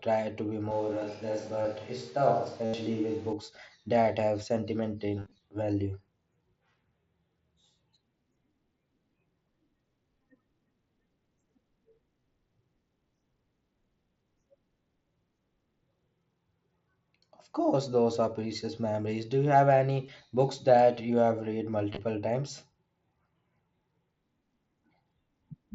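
Speech, with a likely switch to a distant microphone from 0.71 to 3.33 s, between "to be" and "that have": the voice turns hollow, roomy and thin in the bass, with room noise about 25 dB below it. The level barely changes, so this is a change of pickup rather than a fade or gain drop, and both transitions are abrupt. Concealed Bluetooth headset packet loss occurs at 1.62–1.65 s, 2.65–2.74 s, 5.19–5.40 s (scattered short gaps totalling 120 ms), 12.21–12.23 s, 20.06–20.08 s (after "you have", before "books that you have") and 21.93–21.99 s (after "that you have read"). Instead of falling silent, each gap is filled by repeating the last fraction of waveform; longer runs sound like a buzzy held tone at full level with a small warble as real audio resumes. The run at 2.65 s loses 82.5 ms. Throughout, the sound is limited to 8 kHz by the headset's mSBC link.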